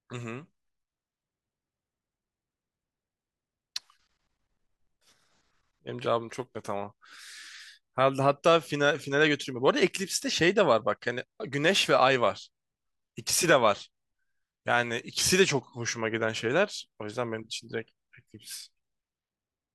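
Speech, with nothing technically wrong to report.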